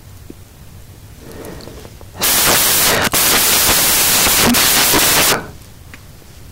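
From start to finish the speech carries loud, hissing white noise. These are samples built from the wrong bytes: each value is assembled misaligned or byte-swapped, so the rapidly changing low bits dominate every sample.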